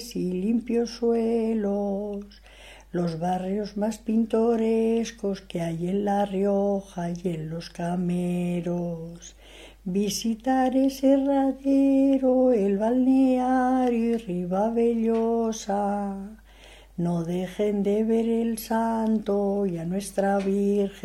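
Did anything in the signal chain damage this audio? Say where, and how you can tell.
No, nothing along the signal chain audibly damages this audio; its level, continuity and timing hold steady throughout, with no stage leaving a mark on the sound.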